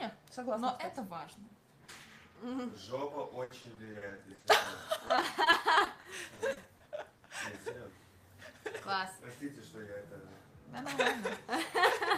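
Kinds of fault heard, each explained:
Repeated packet loss (robotic sound): Audio packets went missing again and again, each hole patched by extending the preceding sound. Between 3.43 and 4.67 s, twelve gaps (longest 70 ms) cover about a quarter of the stretch, and from 5.07 to 6.82 s another twelve leave choppy sound with pieces missing.
Short concealed packet loss: A single brief dropout at about 7.2 s, roughly 20 ms of missing audio, was filled by continuing the previous sound and blending back into the real signal, leaving a short smear or wobble rather than an audible gap.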